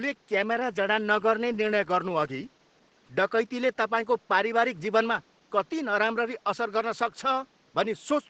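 From start to finish the speech sounds muffled, slightly hoarse and faintly robotic, with nothing above about 8 kHz. This is Opus voice compression in its SILK mode, coarsely coding the voice's excitation in a wideband channel, which fits a bitrate around 12 kbps. The room noise, about 37 dB below the speech, passes through faintly.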